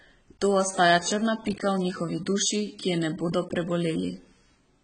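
AAC compression runs throughout the speech, likely AAC-LC near 16 kbps. Nothing survives above 9.3 kHz, so the sound is dull, smeared and heavily damaged.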